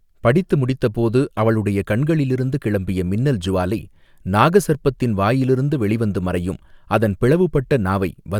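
No technical faults can be heard anywhere in the speech recording; the signal holds steady throughout, with nothing breaking into it.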